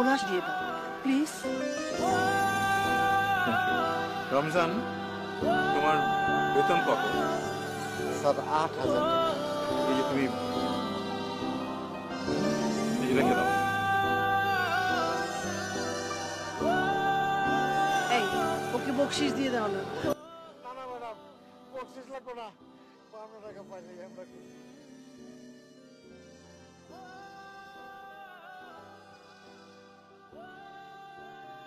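From 20.13 s to the end, the sound collapses to a faint remnant about 20 dB down. The likely cause is one channel inverted, so shared centre content cancels when the channels are summed to mono.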